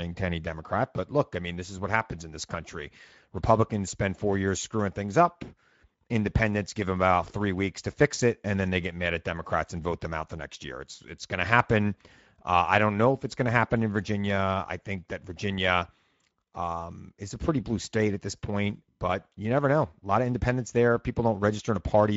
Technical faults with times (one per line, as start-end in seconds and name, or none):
0.00-22.16 Speex codec